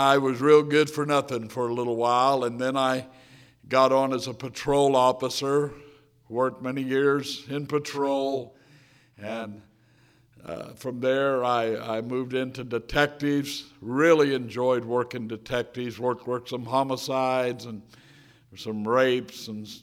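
From 7.93 to 9.97 s there is channel delay (doubling). One channel runs about 40 ms late. Summed to mono, the sound doubles with an equal-level slap.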